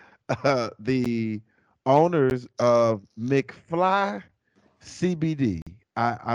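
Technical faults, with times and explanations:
1.05 s and 2.30 s, block of digital silence: The speech drops out for about 12 ms each time, which fits a 512-sample buffer left unfilled. Each gap is under about 15 ms, too short to hear as a hole, and comes across as a tick or dip.
5.62 to 5.67 s, block of digital silence: A longer zeroed stretch of about 46 ms, consistent with four such buffers missed in a row. The edges are abrupt, and a brief hole in the speech is audible between them.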